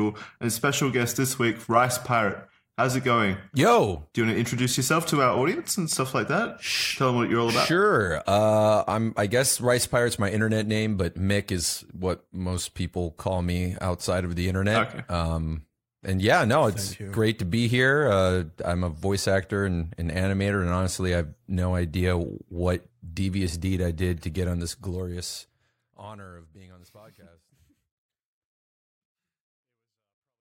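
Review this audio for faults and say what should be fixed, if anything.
Nothing here needs fixing, and the smooth fade-out that begins around 25 seconds eases the sound down to silence at the end just as an editor would intend.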